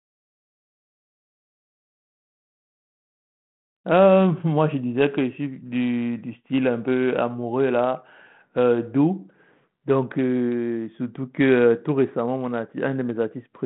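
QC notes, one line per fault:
No faults found: the speech carries a normal 32 kbit/s G.726 telephone path, band-limited to roughly 150 Hz to 3.4 kHz with nothing above 3.9 kHz and only light coding texture.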